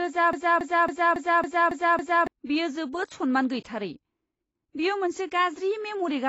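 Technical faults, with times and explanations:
Throughout: AAC compression. The sound is dull and smeared, with nothing above 8 kHz and a warbling, fizzy texture on sustained sounds and sibilants. This is likely lossy AAC-LC coding at a low rate, which fits a bitrate around 24 kbps. At that rate the encoder lowers its cut-off and coarsely quantises each frame's frequency lines against a hearing model. The discarded detail leaves holes in the spectrum, so the codec damage is plainly audible.
0.33 to 2.27 s: broken-record loop. A fragment about 276 ms long plays back to back, repeating exactly seven times, so the sound stutters rhythmically instead of moving forward. The likely cause is that the player, encoder or stream stalled and kept sending the last chunk it still held. Whatever audio should have filled those two seconds is lost, and playback resumes after the repeats end.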